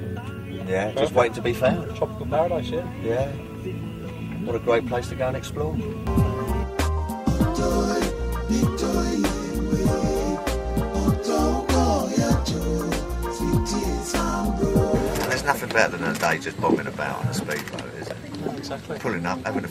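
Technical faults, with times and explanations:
Nothing technical gets in the way anywhere in this one; the audio just runs along as it should.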